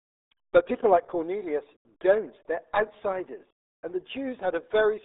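From start to finish the speech carries the signature of the RealAudio 14.4 codec, the RealAudio 1 speech codec built for dial-up. The band is confined to roughly 300 Hz to 3.7 kHz, with nothing above 3.8 kHz, so sibilants and consonant detail are gone. Heavy coding damage leaves the voice muffled and gargly, with a watery, smeared texture. The degree of loss points to a bitrate around 8 kbit/s.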